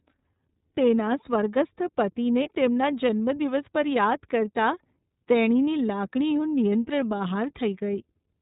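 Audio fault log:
Throughout: iLBC codec. The speech is narrowband with nothing above 4 kHz, and each 30 ms frame is coded on its own. That leaves a plainly audible rough, slightly synthetic edge, which fits a rate near 13.3 kbps. A spectrogram shows a hard ceiling at 4 kHz with empty space above it.
2.42 to 2.49 s: lost iLBC frames. Right after "સ્વર્ગસ્થ પતિને", about 30 ms of signal, which points to a single lost frame, is filled by the decoder repeating the last pitch cycle blended with noise. It comes out as a brief buzzy, held vowel. The voice recovers almost at once at "તેમના જન્મદિવસ પર યાદ". On the waveform this shows as a short run of near-identical periodic cycles.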